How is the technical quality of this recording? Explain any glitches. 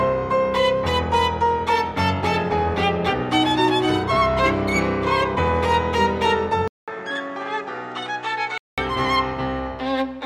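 There is one glitch: an input switched to a poorer device, from 6.68 to 8.78 s. The sound drops out for 200 ms, then returns duller and boxier, with nothing above 8.8 kHz, a few decibels quieter, and carrying a new background hiss well below the signal. This is likely the recording system changing to a different, narrower-band microphone partway through, which brings its own tone, level and noise. At 8.78 s the fuller sound returns.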